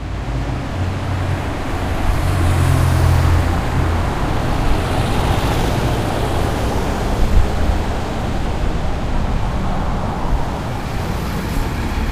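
No technical faults can be heard anywhere in this audio.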